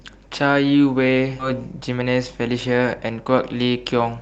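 At 1.39 to 1.41 s the speech hits a skip ahead. About 0.7 s of audio was dropped, and playback jumps forward with no gap, joining the two sides almost directly.

From 1.53 to 3.43 s comes a jitter buffer speed-up. The buffer had built up extra delay. Removing tiny pitch-period pieces repeatedly runs the speech about 12% fast at unchanged pitch, so it sounds hurried. Roughly a fifth of a second is shed. The call codec's band limit near 8 kHz holds throughout.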